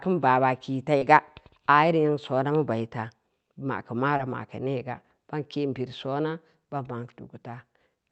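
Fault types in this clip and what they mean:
Short concealed packet loss: missing audio was filled by extending the preceding speech, heard as two brief smears, 40 ms at 0.97 s and 20 ms at 4.17 s.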